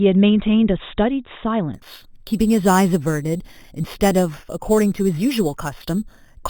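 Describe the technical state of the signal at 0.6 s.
The signal at 0.6 s is intact, with no audible fault at that moment.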